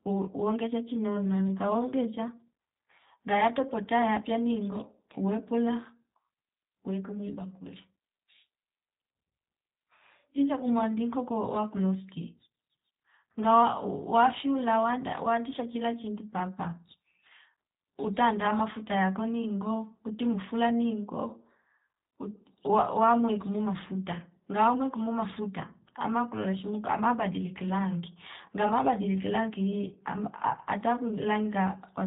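Throughout, the speech carries plain G.729 codec damage: nothing above 3.8 kHz, plus a rough, synthetic edge from pulse-rebuilt excitation that a simple low-pass wouldn't add.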